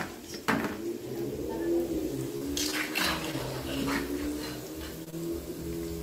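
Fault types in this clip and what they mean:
Repeated packet loss (robotic sound): packets kept going missing between 2.37 and 3.35 s, with four gaps, the longest 35 ms, each patched by stretching the preceding sound. Repeated patching makes that stretch choppy, with small pieces dropped out.
Short concealed packet loss: two brief losses, at 5.04 to 5.08 s and 5.10 to 5.14 s, each about 20 ms, arrived too late to decode and were filled by continuing the last sound before blending back, leaving quick smears or wobbles close together.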